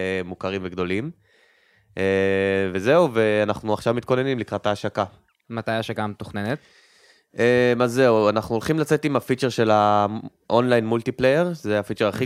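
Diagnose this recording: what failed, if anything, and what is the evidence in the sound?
No faults detected.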